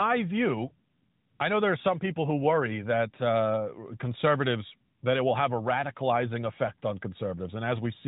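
No faults detected in the speech; the AMR-NB narrowband path at 12.2 kbps is working as expected, with the band-limiting at 4 kHz and light coding texture that path always imposes.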